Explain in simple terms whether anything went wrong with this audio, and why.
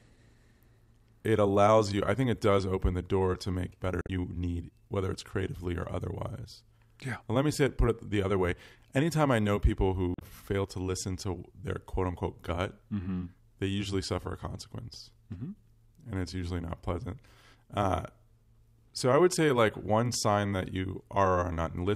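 Two short stretches of damaged data in a compressed stream: parts of the file were corrupted, so the decoder misread those frames and lost its place until it found the next good one. You hear brief glitchy blips at about 4.01 to 4.09 seconds and 10.12 to 10.22 seconds.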